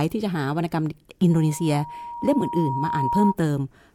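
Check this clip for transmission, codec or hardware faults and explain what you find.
One fault is present, a loudspeaker feedback squeal from 1.30 to 3.35 s. The microphone picked up the loudspeaker it was feeding, and at 949 Hz the loop gain rose above one. That tone fed on itself, swelling over roughly two seconds into a squeal that stands a few decibels above the speech.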